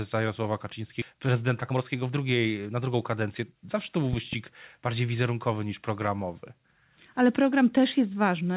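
At 1.02 to 1.04 s the speech lurches forward: a chunk of roughly 0.7 s simply never plays, and the sound on either side is butted together with no gap or fill. This is a skip ahead. Audio had piled up behind a delay, so the receiver threw away the stretch it was holding and jumped straight to later material, cutting the listening delay by about the same amount.

From 1.13 to 3.53 s the speech sounds rushed at the same pitch, running at about 113% of normal speed. This is jitter buffer speed-up. The buffer was holding more audio than it wanted, so the receiver repeatedly cut out tiny slices a pitch period or so long, trimming around a third of a second in total over those 2.4 s to bring the delay back down.

Between 4.13 and 4.35 s two sharp loud pops land on top of the speech, peaking about 10 dB above it, while the talking carries straight on underneath. A brief voltage step or pulse entered the signal, most likely from something electrical such as a plug, switch, static discharge or driver glitch, and the downstream circuitry shaped each into a short crack. 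The whole clip is also band-limited with nothing above 4 kHz, which fits a G.711 mu-law call path.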